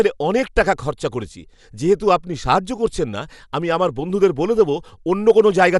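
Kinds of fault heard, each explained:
Dolby Digital compression: likely a low-bitrate AC-3 encode, around 64 kbps, leaving the speech dull with nothing above 11.4 kHz and rough, fluttering fill noise.
Hard clipping: from 5.29 to 5.65 s, after "বলে দেবো", peaks overdriven by about 3 dB are cut flat, adding crackling harmonics.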